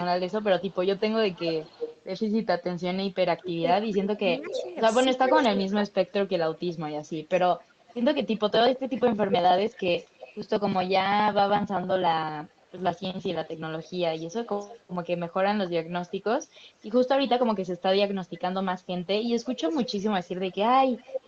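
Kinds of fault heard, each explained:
Echo leak: a copy of the speech trails it by 238 to 317 ms, about 5 to 25 dB down, likely loudspeaker sound the canceller missed.
Speech suppressed in double talk: from 3.42 to 6.13 s the speech dips by up to about 20 dB, likely the canceller ducking both talkers at once.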